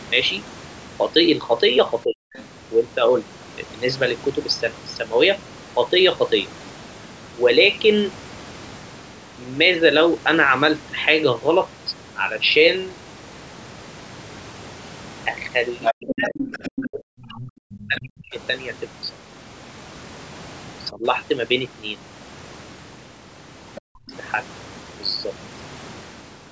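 At 2.04 to 2.22 s, the sound drops sharply, by about 40 dB, then recovers. From 2.34 to 2.45 s, a faint second voice sits far beneath it. That voice returns from 15.82 to 16.9 s, only about 10 dB down, and again from 17.25 to 18.0 s. Meanwhile, from 15.92 to 18.35 s, the main talker is turned down for around one and a half seconds. A shallower dip of about 15 dB follows at 20.91 to 21.04 s. A brief scrap of the second voice appears at 23.75 to 23.81 s. Then a deep drop comes from 23.9 to 24.13 s.

The dropouts are speech suppressed in double talk. Both sides likely talked at once. The echo canceller could not tell its talker from the loudspeaker echo, so it turned everything down.

The second voice is the other side's voice leaking through. It is likely loudspeaker sound that the canceller failed to remove from the microphone.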